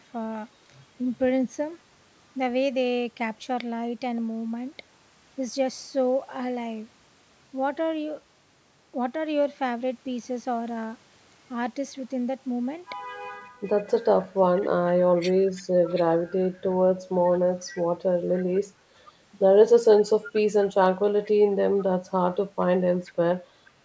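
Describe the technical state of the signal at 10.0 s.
At 10.0 s the speech is intact, with no fault present, only the ordinary band-limiting of call microphone processing, which leaves nothing above 8 kHz and trims the lowest bass.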